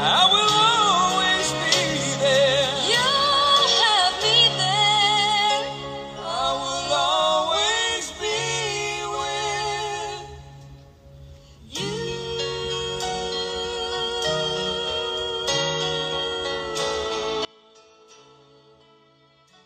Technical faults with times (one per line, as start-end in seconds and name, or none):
17.45-19.65 audio dropout to a faint residue